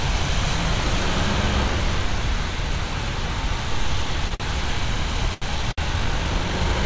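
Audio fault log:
4.28, 4.35, 5.34 and 5.72 s: short stall from a late packet. The sound freezes for 28, 50, 79 and 60 ms, then resumes intact, unlike a dropout.
5.92 to 6.85 s: time-stretched section. The sound runs 1.51 times faster, rushed yet at the same pitch, likely squeezed by software, unlike faster playback, which raises pitch.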